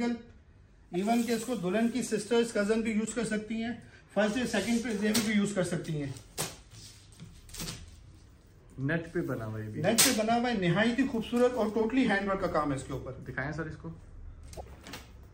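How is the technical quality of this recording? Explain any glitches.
The recording has two kinds of glitch: several corrupt frame decoded events and one dropped-samples click.

Corrupt frame decoded at 0.94–0.96 s, 3.05–3.13 s, 9.59 s and 14.53–14.61 s. Damaged bits in one to a few compressed frames were decoded anyway, scattering energy to wrong frequencies. Each is a brief chirp or noise burst, a small misplaced patch on a spectrogram.

At 9.88 s there is a single sharp click, likely dropped samples: a couple of samples missing makes the waveform jump abruptly. The gap lasts a tiny fraction of a millisecond, showing as a thin vertical line across the spectrogram and a step in the waveform.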